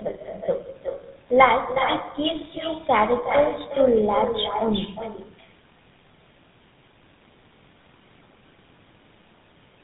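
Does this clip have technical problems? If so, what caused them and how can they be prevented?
Yes. Throughout, every phrase is followed by a quieter, thinner copy about 7 dB down and roughly 0.4 s later. This is echo with no canceller: the far end's loudspeaker feeds its microphone, and nothing removes that signal. An echo canceller at the far end, or a headset there, prevents it.

The speech also sounds rough, muffled and warbly, with nothing above 3.8 kHz. This points to tandem speech coding, with two GSM full-rate stages re-encoding each other's output through a G.711 hop. Passing the coded speech through unchanged (transcoder-free operation) prevents it.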